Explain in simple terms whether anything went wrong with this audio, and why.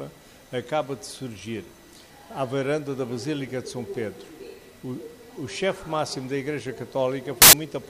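Near the end, from 7.42 to 7.53 seconds, the sound turns into a short burst of loud hiss. This is a case of samples built from the wrong bytes. Digital audio stores each moment as a number split across several bytes. Here the player joined those bytes in the wrong order or at the wrong position. The tiny, jittery parts of each number became the big parts. So for about a tenth of a second, the real sound is replaced by harsh noise.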